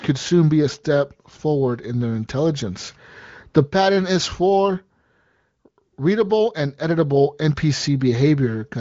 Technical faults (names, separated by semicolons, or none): none